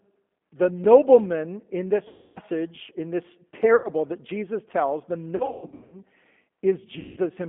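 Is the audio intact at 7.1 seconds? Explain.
No. From 6.99 to 7.20 s the speech smears into a stretched buzzy tone or coloured noise that fades and stays weak as the sound resumes. This is VoIP packet loss concealed by the speech codec: about 180 ms of audio went missing, and the decoder filled the gap by repeating its last pitch and vocal tract filter at falling gain.

The whole clip, this moment included, is also plainly rough and synthetic, with the band cut to roughly 200 Hz to 3.5 kHz. That points to the G.729 codec, which fits an 8 kbit/s link that rebuilds speech from a filter, a pitch predictor and a few pulses per frame.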